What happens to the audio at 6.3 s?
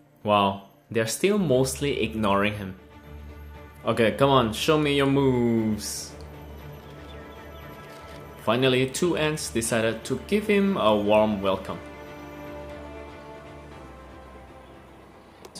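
Nothing goes wrong at 6.3 s; the audio plays through that moment intact, with no dropout, click or distortion.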